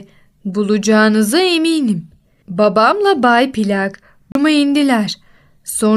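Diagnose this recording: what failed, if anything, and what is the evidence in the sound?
A CD skip at the playback stage. The speech drops out at 4.32 s in a tick-like mute of roughly 30 ms, then resumes at 4.35 s from a different point. A knock or disc flaw made the laser jump to another turn of the spiral, so the player briefly muted before continuing.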